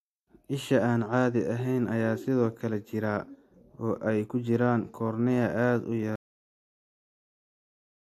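Speech clip with a cut-off end: at 6.16 s, right after "cornea aad u", the audio stops mid-sound and falls to dead digital silence with no decay, because the final buffers never got written.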